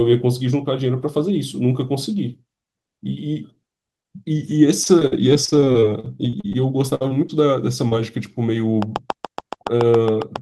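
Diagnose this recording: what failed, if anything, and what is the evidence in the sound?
Repeated packet loss (robotic sound), 4.83 to 7.31 s, a network fault. The speech turns choppy as 24 separate gaps, the longest 59 ms, are patched by stretching the preceding audio. About a fifth of that stretch is synthesized fill, leaving pieces of speech missing.

Short concealed packet loss, 7.89 to 7.93 s, also on the network path. A 20 ms hole in the stream was covered by the decoder's concealment, which extended the prior sound for about 26 ms and then blended back into real audio. The result is a brief smear.

Train of clicks, 8.82 s to the end of the clip, heard as regular ticking at about 7.2 clicks per second and about 15 dB above the speech. The similar, evenly spaced pulses point to periodic interference, likely from nearby equipment coupling into the analogue wiring or a faulty connection or power supply.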